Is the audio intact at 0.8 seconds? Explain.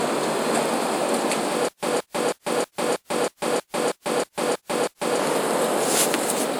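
No. Generation loss runs through the whole clip, including 0.8 s: swirly, hollow, smeared sound with blurred attacks, likely from about three successive lossy encodes, fitting WMA at 128 kbit/s. Unlike a single low-bitrate encode, the top end still reaches 20.1 kHz, yet the hollowness is worse than that bitrate alone would give.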